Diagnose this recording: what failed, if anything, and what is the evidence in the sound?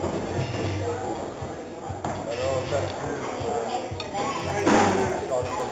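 From 4.3 s to the end, a steady ticking rides on the sound, ten clicks per second. That rate points to a resampler restarted on every block in the sample-rate conversion stage, which here converts 16 kHz material to 48 kHz in 100 ms blocks. Each block is converted in isolation, so at every boundary the filter lacks the real neighbouring samples and produces a small error. Those repeated boundary errors are the regular 10 Hz ticks.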